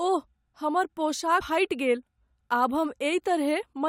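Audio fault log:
1.40 s, damaged data in a compressed stream: a brief glitch cuts into the speech, lasting only about 12 ms. Part of the compressed data at this point is corrupt, so the decoder reads garbage in place of a valid frame, loses its place in the stream and has to hunt for the next good frame header. The misdecoded fragment comes out as that short glitch before normal decoding picks up again.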